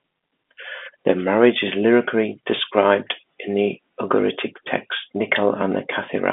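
No technical faults occur in this speech, which comes through a telephone line coded with G.711.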